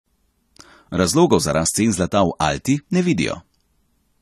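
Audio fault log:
Throughout: AAC compression. The speech has nothing above 14.1 kHz and plainly audible codec damage: consonants and sibilants sound dull and smeared, with a fizzy, warbling texture on sustained sounds. This is the likely cause. An AAC-LC encoder quantising each frame's frequency lines coarsely against a hearing model lowers the bandwidth and leaves gaps or noise-filled bands in the spectrum. The damage fits a low bitrate, around 32 kbps.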